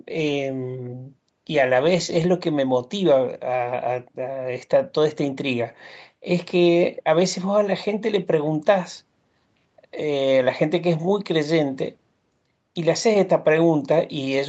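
Nothing stood out on listening to this speech, which has the narrowed top end of a call path, with nothing above about 8 kHz.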